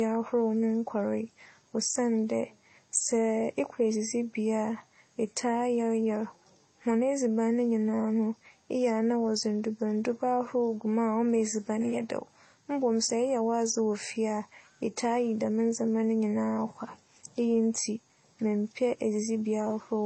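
Throughout, the speech sounds dull, with the artefacts of both codecs heard together and nothing above about 8.7 kHz, likely from transcoding between lossy codecs: 32 kbit/s MP3 re-encoded as HE-AAC.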